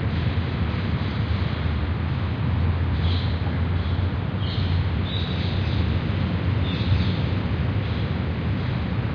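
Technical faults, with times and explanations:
No technical faults are audible anywhere in the audio.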